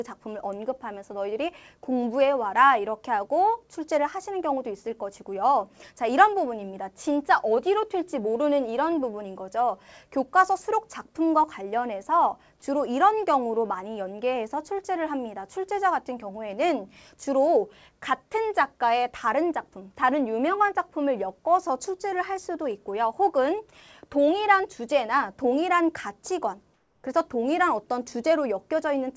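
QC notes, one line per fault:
26.74–27.04 s, comfort noise in place of the background: for 300 ms the real room tone drops out and a steady, featureless hiss takes its place, about 4 dB quieter. Likely discontinuous transmission, with the receiver synthesising noise while the sender's voice detector judged the pause silent. The band stops at 8 kHz throughout, consistent with the call codec.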